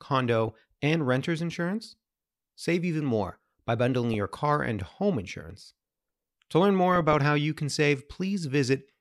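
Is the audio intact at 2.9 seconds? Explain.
Yes, the speech at 2.9 seconds is intact, with no dropout, click, distortion or other fault at that moment.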